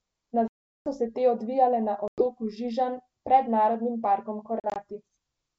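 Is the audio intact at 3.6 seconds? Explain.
Yes, the audio is intact at 3.6 seconds, with the G.722 wideband telephone coding at 64 kbit/s carrying the speech there without any fault.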